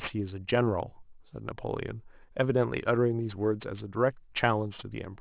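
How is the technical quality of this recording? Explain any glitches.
The recording has one technical fault, aliasing, present throughout the clip. The audio appears to have been reduced to a much lower sample rate, consistent with a drop from 24 kHz to 8 kHz, without an anti-aliasing filter first. Content above the new 4 kHz limit folds back below it at wrong, unrelated frequencies, roughly 20 dB under the speech. Sibilants come out gritty and metallic, and the spectrum runs hard up to the 4 kHz band edge.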